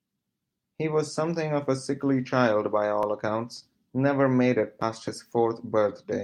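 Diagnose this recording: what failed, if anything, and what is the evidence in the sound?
A short concealed packet loss at the network stage, at 3.59 to 3.63 s: about 20 ms of the speech never reached the decoder in time, and the receiver filled the gap by extending the preceding sound before blending back into the real signal. What you hear is a brief smear rather than a hole. That sets it apart from a buffer underrun or dropout, which leaves silence or a hard click, because here the concealment papers over the gap with synthesised continuation.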